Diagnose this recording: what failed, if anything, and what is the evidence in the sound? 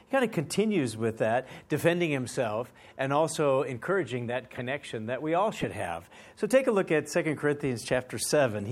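Corrupt frame decoded at 1.54–1.56, 4.57–4.61 and 5.61–5.65 s: damaged codec frames decoded anyway, each a brief chirp, squeak, blip or burst of misplaced energy, the later two louder.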